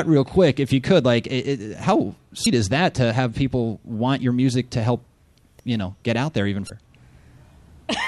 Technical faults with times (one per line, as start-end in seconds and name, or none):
2.43-2.46 damaged data in a compressed stream
6.66-6.70 damaged data in a compressed stream